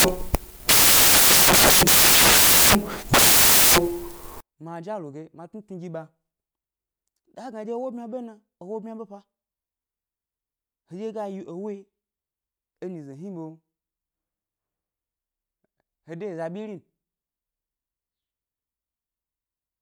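From the start to 4.41 s the speech is buried in loud, harsh broadband noise from samples built from the wrong bytes: the reader misassembles each sample, so jittery low bits become the large values. Unlike added hiss, the noise swamps the speech rather than sitting beneath it.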